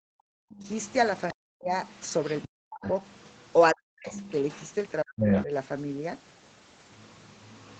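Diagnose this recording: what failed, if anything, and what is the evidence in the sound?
Speech suppressed in double talk, at the call-processing stage: the talker's level collapses, by around 40 dB at worst, at 0.0–0.65, 1.33–1.73, 2.47–2.85, 3.72–4.11 and 5.03–5.51 s. It is likely an echo canceller that, with both sides talking, clamped the near talker along with the echo. These show as gaping holes in the waveform and blank vertical bands on a spectrogram.

The other side's voice is leaking through, also in call processing. A second voice is present at 0.53–3.53 s about 20 dB under the talker, at 4.11–5.44 s roughly as loud as the talker, and from 6.9 s to the end about 25 dB down. The likely cause is incomplete echo cancellation. It appears as a separate, overlapping harmonic pattern on the spectrogram.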